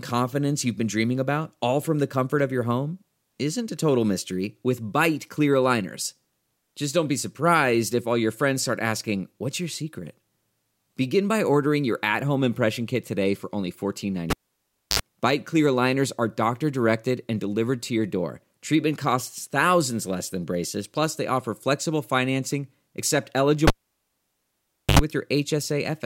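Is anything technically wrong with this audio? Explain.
Yes. Twice in this speech the cable gets pulled and plugged in, at 14.30 s and again at 23.67 s. Each time a pop drops the sound to near silence for about 0.64 s, then 1.27 s. A short 50 Hz mains buzz of about 61 ms, then 78 ms, follows while only the tip makes contact, and a second pop brings the sound back.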